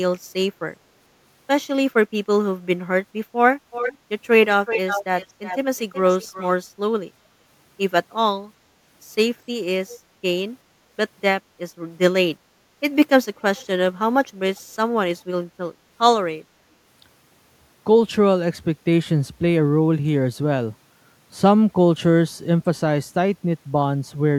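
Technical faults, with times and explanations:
3.71–3.98 s, 4.66–5.58 s, 5.77–6.53 s, 9.89–9.99 s and 13.41–13.67 s, echo leak: a delayed copy of the speech returns 372 ms late (397 ms in the last burst), likely from an echo canceller letting loudspeaker pickup through. The first two are nearly as loud as the speech, and the later three are faint. A spectrogram shows the harmonic and formant pattern repeated about 0.37 s later and weaker, and the waveform shows a smaller trailing copy of the speech envelope.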